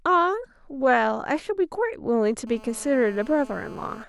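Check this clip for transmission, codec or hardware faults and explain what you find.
GSM phone buzz runs from 2.47 to 4.04 s. A nearby 2G phone on a call bursts 217 times a second, and the circuitry rectifies it. The result is a steady, raspy buzz, about 22 dB below the speech.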